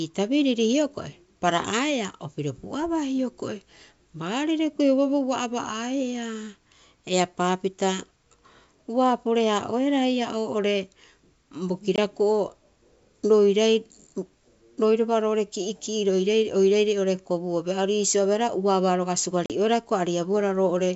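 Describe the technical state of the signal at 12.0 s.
Packet loss on an ADPCM call occurs from 11.96 to 11.99 s: about 20 ms of speech, roughly one packet, drops to a hard-edged silent gap. The decoder's adaptive predictor and step size lose sync with the sender, so speech resumes with brief, slight distortion before settling.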